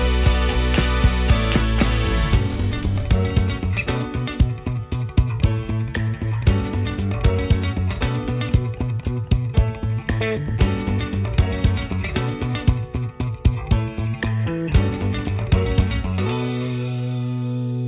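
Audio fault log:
No faults found in this clip.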